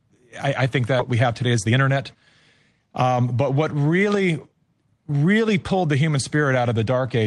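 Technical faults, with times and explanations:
0.99 to 1.01 s, skip ahead: Right after "I I think", playback jumps forward with no gap. About a second of speech is missing. Queued later audio replaced a dropped stretch, so the two sides join almost directly. The delay falls by roughly a second.
1.11 to 3.04 s, jitter buffer speed-up: Speech runs about 14% fast at unchanged pitch and sounds hurried, ending before "but what really". The buffer held too much audio. The receiver trimmed many short pitch-period pieces, about a third of a second in total.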